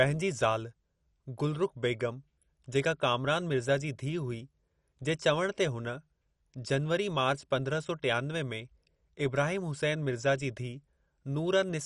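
Throughout the speech, the encoder has most likely run short of bits under MP2 compression, at a rate consistent with about 48 kb/s, so upper sub-bands are shut off and nothing survives above 11.3 kHz. The sound is dull, with an audible gurgling, granular roughness.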